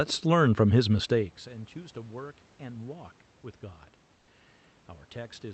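From 1.02 to 1.54 s the speech has zipper noise: a drop of roughly 20 dB is applied in coarse steps, around a hundred per second, with no smoothing, so each step leaves a tiny click. The result is a fast buzzy ticking, unlike a smooth fade.

From 4.15 to 4.27 s, for 120 ms, comfort noise replaces the background. The room sound turns into a flat, featureless hiss about 3 dB quieter, likely because Opus discontinuous transmission stopped sending audio and the receiver synthesised filler, rather than a dropout.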